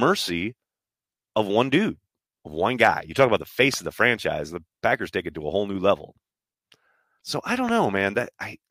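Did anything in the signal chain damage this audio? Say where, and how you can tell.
Yes. There's a loud pop at 3.74 to 3.76 s, right after "talk about the" and before "of the franchise the", and another at 7.69 to 7.71 s. Each is a single sharp pulse about 10 dB above the speech, with the talk carrying on underneath. That's likely an analogue-side voltage step, such as a plug, switch or static discharge, though a driver glitch fits too.

At 7.17 to 7.20 s there's damaged data in the compressed stream, a brief codec-stage disruption. Corrupted bytes there would have thrown the decoder off its frame sync, leaving it to misread or drop frames until it found the next header.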